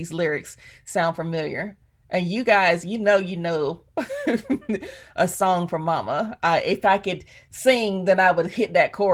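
Listening through the speech, nothing stood out as a technical fault at any point.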